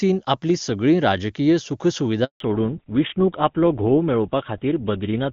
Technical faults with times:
2.24-2.40 handover gap
2.40-5.33 fallback to narrowband

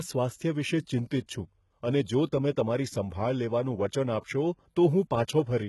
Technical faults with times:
0.00-5.68 HE-AAC compression
4.19-4.23 pre-echo

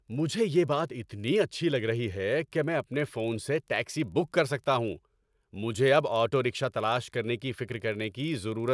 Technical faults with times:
0.00-8.74 resampler restarted on every block

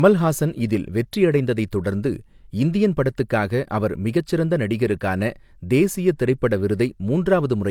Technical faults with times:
0.00-7.71 low-bitrate audio saved at a high bitrate

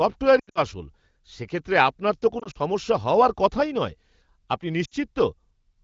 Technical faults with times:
0.39-0.59 lost AMR speech frames
2.39-2.58 lost AMR speech frames
4.85-4.94 lost AMR speech frames

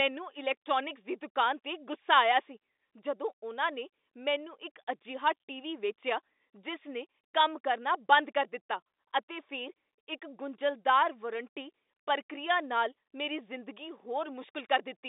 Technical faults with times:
none

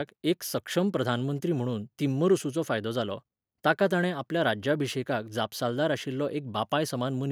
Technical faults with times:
none

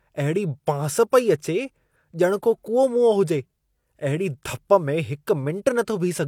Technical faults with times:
none

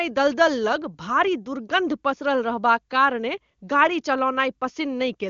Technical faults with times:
none

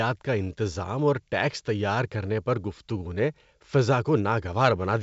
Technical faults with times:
none

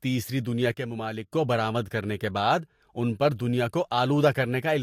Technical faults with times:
0.72-1.32 one channel drops out

